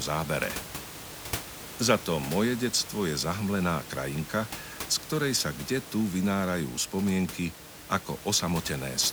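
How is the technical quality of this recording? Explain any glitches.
Nothing stood out on listening to the recording, apart from the room's own background noise sitting about 13 dB below the speech.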